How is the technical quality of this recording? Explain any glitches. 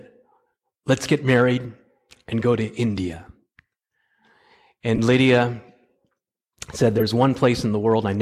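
The speech is marred by three short corrupt frames that were decoded anyway, at 1.48 to 1.53 s, 4.95 to 4.99 s and 6.97 to 7.03 s. Each time, flipped bits in one or two compressed frames made the decoder apply wrong gains or codes, putting energy at the wrong frequencies. The result is a brief burst of misplaced sound, growing louder across the three events to a peak of roughly -5 dBFS. On a spectrogram, each appears as a brief vertical patch of misplaced energy. On the waveform, each is a sharp spike lasting about 35 to 55 ms.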